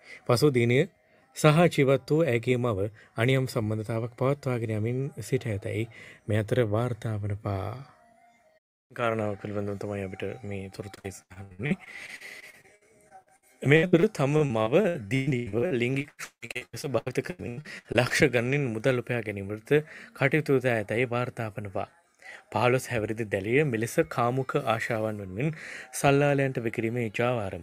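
From 10.95 to 18.12 s there is repeated packet loss, producing a robotic sound: dozens of short dropouts, the longest about 178 ms, each papered over by extending the preceding audio. Roughly a third of that stretch is concealed, leaving choppy audio with pieces missing.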